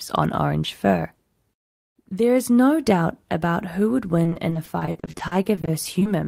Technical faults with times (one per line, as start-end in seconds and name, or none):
4.23-6.07 repeated packet loss (robotic sound)